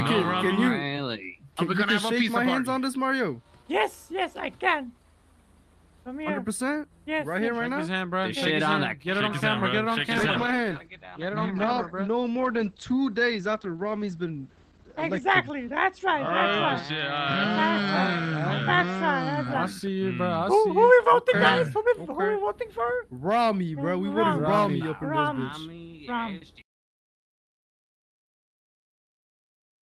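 A call bitrate drop runs from 10.14 to 19.51 s: the call's bandwidth estimate collapsed and the encoder was starved of bits, consistent with a fall from 40 to 12 kbps. The audio turns coarse and muffled, cut off above 8 kHz, worst for 5.26 s.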